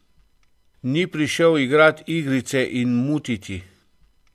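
No technical faults turn up anywhere in the recording; the signal stays continuous and steady throughout, with nothing that points to a problem in capture, processing or playback.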